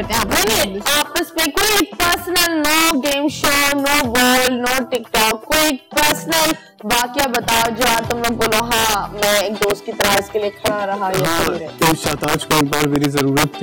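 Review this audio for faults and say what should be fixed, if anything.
Integer overflow runs through the whole recording: loud peaks produce violent, sharp cracks instead of the flattened tops of clipping. The signal is pushed about 6 dB past the integer limit, and on a few percent of samples the value wraps from the top of the range to the opposite sign, a full-scale jump at each such peak. To prevent it, use saturating arithmetic or clamp sums and gain stages before converting to integer.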